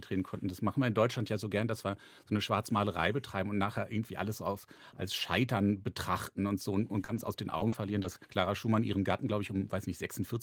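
From 6.79 to 8.06 s the speech breaks up from repeated packet loss, giving a robotic sound. Five short holes follow one another, the longest 40 ms. Each is patched by stretching the sound just before it, roughly 150 ms in all. The result is choppy.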